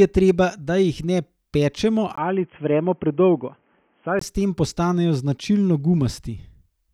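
The input likely switched to a poorer device in this speech clip, from 2.16 to 4.21 s, just after "da jih ne pečemo" and until "s tem". It opens with a 20 ms gap, then the band stops at 3.3 kHz, dulling the voice at the same loudness over a faint new noise floor.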